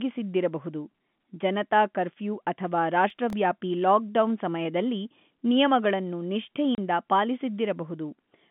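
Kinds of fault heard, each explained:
Processor overload crackle: from 3.10 to 3.33 s, just after "ಜನತಾ ಕರ್ಫ್ಯೂ ಅಥವಾ", a gritty crackle tears across the speech and clears before "ಲಾಕ್ಡೌನ್ ಸಮಯದಲ್ಲಿ ನಿಯಮಗಳನ್ನು". The processor fell behind and missed several deadlines in a row. Each missed buffer replayed a scrap of stale audio with hard edges. These buffers sound about 0.7 ms long, so the repeated splices fuse into roughness rather than distinct skips.
Packet loss filled with silence: at 6.75 s, right after "ಲಾಕ್ಡೌನ್ ಸಮಯದಲ್ಲಿ ನಿಯಮಗಳನ್ನು", the speech drops out for 30 ms, a clean hole with hard edges. The receiver got nothing for that stretch and inserted digital silence instead of concealing the gap. The length fits a single lost packet. The hole interrupts the band-limited telephone sound around it.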